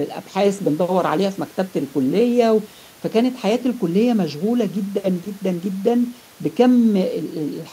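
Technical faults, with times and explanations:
No technical faults are audible anywhere in the speech.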